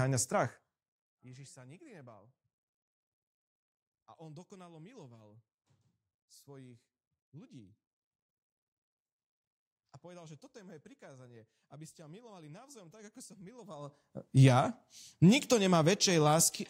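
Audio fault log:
13.58–14.20 s zipper noise: an unsmoothed level shift of around 25 dB in hard steps, roughly a hundred per second, leaves evenly spaced vertical click lines on a spectrogram and a staircase waveform envelope.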